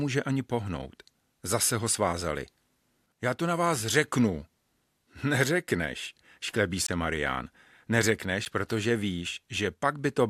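Speech, broken twice by a block of digital silence. At 6.87 to 6.89 s the sound drops to silence for 20 ms. At 8.45 s a shorter 10 ms gap follows, heard as a tick or dip. Both cuts are abrupt, with no fade in or out. Such hard blocks of silence point to the playback program failing to fill its output buffer in time.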